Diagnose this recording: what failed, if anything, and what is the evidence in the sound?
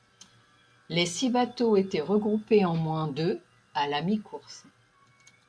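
Nothing failed in this recording, and the sound holds no evidence of a fault at any stage.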